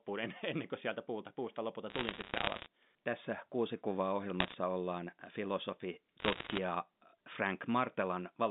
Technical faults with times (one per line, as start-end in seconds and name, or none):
1.90-2.66 bit errors on a digital phone line
4.40-4.54 bit errors on a digital phone line
6.20-6.58 bit errors on a digital phone line